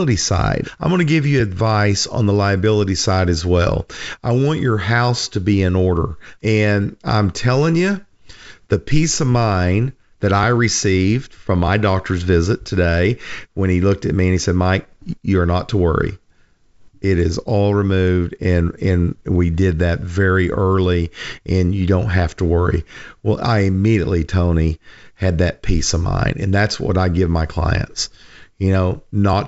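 Nothing stood out on listening to this speech, which carries the band limit of G.722 wideband telephone coding at 64 kbit/s, with no content above about 7.7 kHz.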